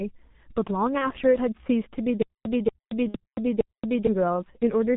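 Throughout the speech, channel delay (comb filtering) gives a hollow, phasey tone. One channel lags by roughly a tenth of a millisecond, so the mono sum cancels at evenly spaced frequencies starting near 5 kHz. A spectrogram shows fixed horizontal notch bands that never move.

Also present throughout is heavy G.723.1 codec damage, which points to a bitrate of about 6 kbit/s. The speech is muffled and hoarse, and its consonants are smeared. The spectrogram is empty above 4 kHz, and the harmonics look blocky and coarsely stepped from frame to frame.

From 0.98 to 1.12 s, VoIP packet loss concealed by the speech codec stretches the sound into a fading extrapolation. This fits one lost 30 ms frame rebuilt from the previous pitch and filter. The waveform shows a decaying stretch, and the voice stays weak or distorted afterwards.

From 2.22 to 4.07 s there is a stutter with silent gaps, likely a stalled stream retrying. 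A 234 ms fragment repeats four times, each followed by about 227 ms of digital silence, giving a 461 ms cycle. The waveform shows identical blocks separated by flat silent lines.

Within that stretch, from 3.08 to 3.18 s, a second concealed packet loss spans about 60 ms, which fits two lost frames. It is heard as a longer decaying extrapolation, and the spectrogram shows smeared, flattening harmonics that fade before normal detail resumes.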